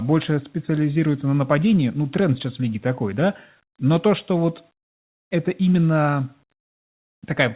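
No technical faults are present in the speech: it carries the ordinary sound of a call microphone chain and a WebRTC call path whose narrowband coding, consistent with G.711 mu-law at 64 kbps, leaves nothing above 4 kHz.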